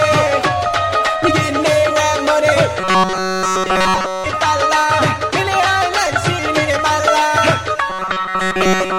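From 2.80 to 4.27 s the sound turns into a rigid, metallic buzz at a fixed 188 Hz, robotic sound from repeated short buffers, likely caused by the same few milliseconds (about 5.3 ms, one period of that buzz) being replayed while fresh audio is missing. Here nearly all of it is repeats. It returns from 7.90 s to the end, with about 70% repeated. Unlike codec warble, the buzz rate never moves with the content.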